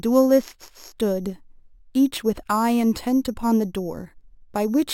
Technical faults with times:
0.00-4.94 imaging from sample-and-hold upsampling

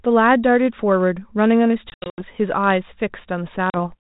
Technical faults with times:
1.90-2.22 packet loss on an ADPCM call
3.70-3.75 packet loss on an ADPCM call

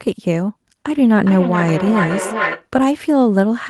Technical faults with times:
0.93-2.69 feedback echo between two devices

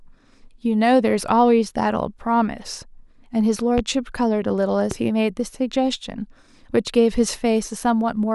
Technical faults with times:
3.78-3.81 loud pop
4.91-4.95 loud pop

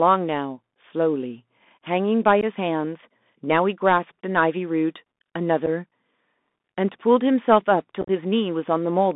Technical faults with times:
0.00-9.15 Bluetooth CVSD headset codec
2.41-2.44 unconcealed Bluetooth headset packet loss
5.66 unconcealed Bluetooth headset packet loss
8.01-8.10 unconcealed Bluetooth headset packet loss

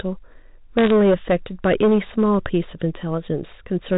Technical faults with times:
0.00-3.97 hard clipping
0.79-0.91 bit errors on a digital phone line

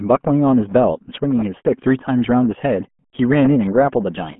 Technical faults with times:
0.00-4.39 RealAudio 14.4 codec

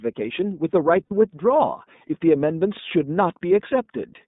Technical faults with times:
0.00-4.28 iLBC codec
1.05-1.12 lost iLBC frames

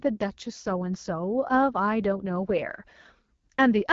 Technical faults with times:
0.00-3.92 AMR wideband (HD Voice) codec

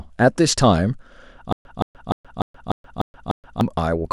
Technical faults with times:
1.52-3.61 stutter with silent gaps

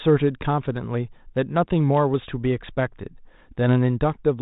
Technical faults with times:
none

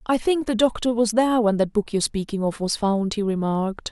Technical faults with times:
0.11-3.92 clock slip clicks

